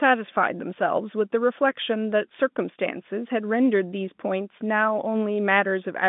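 Nothing goes wrong anywhere in the clip; it's simply speech carried over an ordinary G.711 telephone line, so it has that familiar narrow phone-band sound, roughly 150 Hz up to 3.6 kHz.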